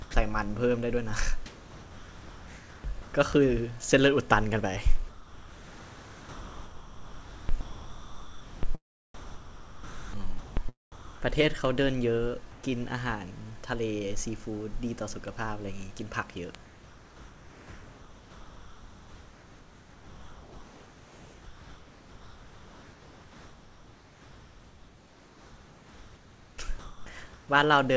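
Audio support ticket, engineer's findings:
Sender voice detector likely misjudging quiet speech as background and stopping transmission; receiver fills gaps with RFC 3389 comfort noise. Sound dropped by the voice detector at 0.02–0.14 s, 10.92–11.22 s and 26.79–27.06 s. Speech cuts to steady hiss or near silence, roughly 90 ms, 260 ms and 210 ms of real sound lost, then returns abruptly when detection retriggers.

Receiving device running on its own clock, not locked to the digital source, about 100 ppm apart. Word clock ticks from 0.24 s to the end, one sample dropped or repeated each time the clocks slip, roughly every 0.2 s. Heard as a regular train of sharp clicks of uneven strength underneath everything, including through the G.722 path, which passes nothing above 8 kHz.

Voice detector likely toggling send/no-send repeatedly within single stretches of speech. Sound chopped by the voice detector at 1.46–3.14 s, 5.09–8.63 s and 9.14–10.57 s, with about 1.5 s, 3.4 s and 1.2 s respectively replaced by comfort noise. 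Syllables and word edges drop out in bursts, giving a stuttering, gated texture across each span.

Discontinuous transmission in a pause, likely from the detector declaring silence; receiver synthesises background from noise-shape updates. Comfort noise in place of the background at 12.51–12.63 s. Real room tone, about 27 dB below loud speech, is swapped for smooth, featureless noise with a level shift of about 3 dB. Heard as a short, flat change in the background's character before the real ambience resumes.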